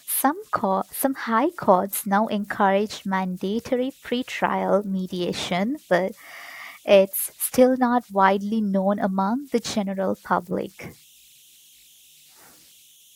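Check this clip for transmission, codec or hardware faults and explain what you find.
There is one hardware fault, present for the whole clip: converter idle tones. An undithered delta-sigma converter settles into repeating bit patterns whenever the speech gets quiet, and these form a faint whistle around 3 kHz in the pauses, with grainy noise under soft passages, about 33 dB below the signal. Broadband hiss would be smooth and pitchless, and mains hum would sit at a steady low frequency, but this is a thin, high, tonal whine.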